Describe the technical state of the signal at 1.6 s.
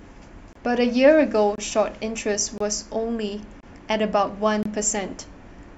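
Just before 1.6 s, from 1.55 to 1.58 s, the speech is broken by a gap between chunks, a hole of silence about 25 ms long. The audio appears to have been assembled from chunks of roughly one second, and at this join silence was left between them, leaving empty space rather than continuous signal. No material is lost, but the sound drops abruptly to silence and resumes with hard edges, heard as a brief dropout.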